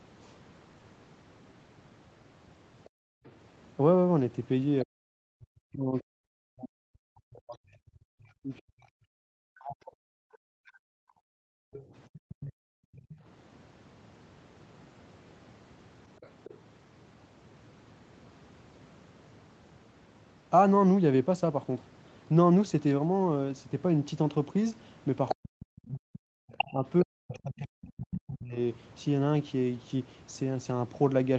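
Speech, coming through a call chain that tops out at about 8 kHz, with a few echo canceller problems. The other side's voice leaking through shows up at 2.84 to 4.84 s, 11.73 to 13.16 s, 16.21 to 16.57 s and 25.29 to 27.87 s. It's a faint second voice, roughly 15 to 25 dB under the talker in the first three spots but nearly as loud as the talker in the last. That's likely loudspeaker playback the canceller didn't fully remove. The background gated by the echo canceller is audible at 2.9 to 3.24 s and again at 11.19 to 13.18 s. The room sound dives by about 40 dB and then comes back, about a second and a half of it in the second stretch. The canceller slammed the mic shut while the far end was playing. Speech suppressed in double talk runs from 4.84 to 10.91 s and from 25.34 to 28.56 s. In both stretches the talker keeps dipping hard, sometimes by as much as 40 dB or so. Most likely both sides were talking at once and the canceller ducked everything.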